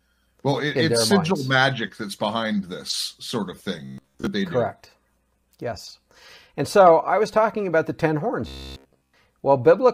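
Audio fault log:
3.85–4.28 s (after "behind this sort of") and 8.48–9.20 s (after "about the ten horns"): robotic sound from repeated short buffers. Speech becomes a rigid metallic buzz at 66.7 Hz, likely from a 15 ms chunk replaying while most of the real audio is skipped. Unlike dropouts or stutter, there are no gaps, only a fixed-rate buzz.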